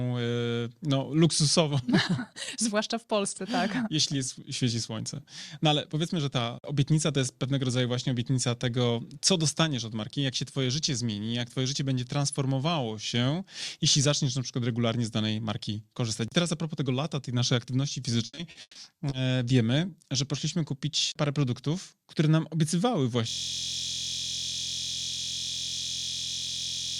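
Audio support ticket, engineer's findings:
Repeated packet loss (robotic sound), 18.25–19.13 s, between "lata tej naszej aktywności" and "wiemy że poszliśmy kupić". Choppy speech, six dropouts, longest 140 ms, about a third of that stretch patched by stretching the last good audio. Network or jitter-buffer side.

System hang loop, 23.29 s right to the end, starting after "produktów które nam obiecywały". The speech is replaced by a steady buzz at about 43 Hz: one 23.22 ms chunk replaying nonstop, which fits a 1024-sample ring buffer. The driver or host froze while the hardware kept cycling.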